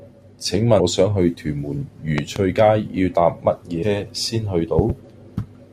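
At 0.79 s, compressed frames were skipped: about ten frames were not played, so roughly a fifth of a second of speech drops out. This fits 21.3 ms frames.

From 2.18 to 2.39 s, a voltage spike, likely from a plug, switch or static discharge, adds a loud pop heard as two sharp thumps about 15 dB above the speech, which carries on beneath them.

At 3.82 s, the same frame skip removes roughly seven frames, about 150 ms.

From 4.79 to 4.92 s, a second double loud pop of similar strength lands on top of the speech.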